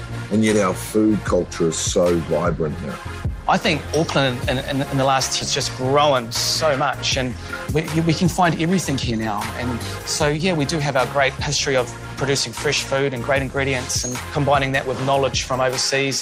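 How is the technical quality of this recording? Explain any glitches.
The recording has two clear timing glitches between about 5.4 and 9.1 s: a sudden jump forward, followed by two stretches that play too fast.

From 5.41 to 5.43 s there is a skip ahead. About 0.4 s of audio is simply missing. Nothing fills the gap. Later audio was already waiting in the receiver, so the lost stretch was discarded and playback jumped straight to it. The two sides join almost directly. The sound lurches forward abruptly, with a piece cut out.

Right after that comes a jitter buffer speed-up. From 5.77 to 6.22 s the audio runs at about 108% speed. From 6.65 to 9.13 s it runs at about 104%. Too much audio had piled up in the buffer, so the receiver trimmed tiny pitch-period slices, again and again. Roughly 50 ms and 100 ms were removed. The pitch stays the same, and the 108% stretch sounds hurried.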